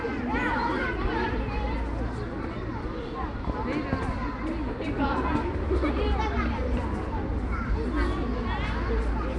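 Likely Nellymoser compression, the old Flash codec, throughout this recording of everyday sound: it spreads a fixed small bit budget across short blocks, filling starved bands with noise. That leaves a plainly audible rough, hissy haze and smeared texture, nothing above 10.6 kHz, and damage consistent with roughly 44 kbps.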